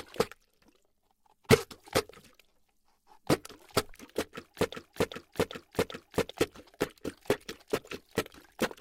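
A broken-record loop runs from 4.74 to 6.31 s. Playback likely stalled on its last fragment, so a 392 ms piece repeats four times back to back, replacing the lost sound.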